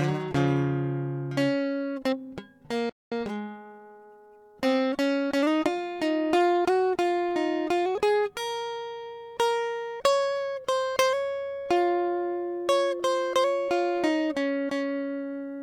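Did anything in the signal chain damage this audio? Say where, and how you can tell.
Yes. At the playback stage, a playback stall cuts the music to silence from 2.89 to 3.12 s, about 220 ms, likely from the player starving for data or its thread being blocked. The waveform shows a flat gap and the spectrogram a blank vertical band before the music resumes.

Straight after, from 3.12 to 4.58 s, the player runs a time-compressed catch-up, cutting and cross-fading small slices to play about 1.15 times fast at unchanged pitch. The harmonics stay level on the spectrogram.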